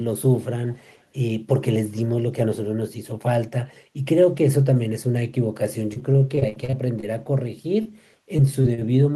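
From 0.73 to 1.05 s there's a very faint delayed copy of the speech, trailing by about 358 ms. That's likely an echo leak, where the far end's echo canceller let loudspeaker pickup slip back through.

Between 5.93 and 7.04 s you get repeated packet loss with a robotic sound. Roughly a fifth of that stretch is patched-over gaps, the longest 41 ms, so it goes choppy.

At 7.82 to 7.87 s a short concealed packet loss fills about 20 ms of missing audio, leaving a quick smear.

Then 8.37 to 8.84 s turns robotic again, with gaps up to 34 ms.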